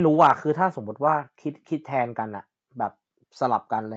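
Nothing goes wrong in this bit of speech; it just sounds like an ordinary call, with the usual bass trim from the microphone processing and nothing above about 8 kHz, which fits a wideband Opus call path.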